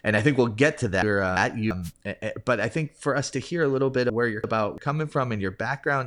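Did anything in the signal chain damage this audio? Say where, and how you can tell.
Yes. Chunks out of order damaged the sound twice, at the buffer stage. After "think we'll get to", the span from 1.02 to 1.71 s plays as a jumble. The same happens after "hear a little bit", from 4.10 to 4.78 s. Each span holds two blocks of about 341 ms. The later block plays first and the earlier one follows, one block late. Nothing is missing, but the joins are hard and the order is wrong.

A wireless microphone noise hit comes earlier in the chain, in the radio link before the converter. From 1.83 to 1.92 s, a burst of static lasting about 90 ms sweeps over the sound. It ends just before "but I think for". The FM signal faded as reflections cancelled each other. The receiver's noise then rose and broke through, which gives the short swish.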